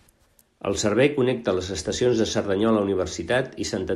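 No technical faults are audible anywhere in this speech recording.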